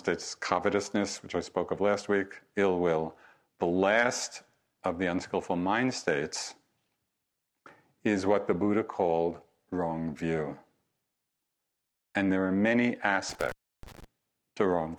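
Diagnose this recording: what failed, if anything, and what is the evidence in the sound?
A loose connection in the analogue wiring, an intermittent contact, opened the signal path briefly between 13.29 and 14.04 s. The speech drops out for about 314 ms, with crackle where the contact breaks and remakes and faint hiss while the line is open.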